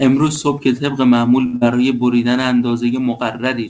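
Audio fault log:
1.46 to 1.56 s, short stall from a late packet: a packet missed its playout time and the jitter buffer ran dry, so the receiver held the last sound for about 72 ms until the packet arrived, then carried on from the same point. No speech is lost, but that moment is drawn out with a faint buzzy sustain, and everything after it plays 72 ms later than before.
1.56 to 1.78 s, burst of packet loss: immediately after the stall, a run of packets arrived too late or not at all. The receiver filled about 49 ms by extending the last sound and turning it down, which gives a brief fading buzz or hiss. It then skipped about 60 ms of speech and resumed further on, so the sound jumps forward with that stretch missing.
2.15 s, bit error spike: a single sample was corrupted by one flipped bit, so its value jumps by a power of two and snaps straight back. This produces one sharp, broadband tick unrelated to the speech around it, heard across the G.722 call band, which carries nothing above 8 kHz.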